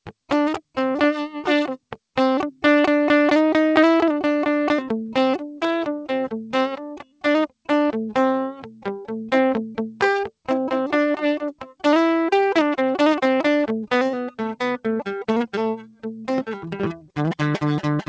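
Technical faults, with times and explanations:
6.77–7.25 s, 8.52–8.86 s, 11.52–11.84 s, 15.78–16.29 s and 16.98–17.17 s: sound cut by the noise suppressor. It treated sustained music as noise, dipping it about 10 to 18 dB, so held tones briefly sink.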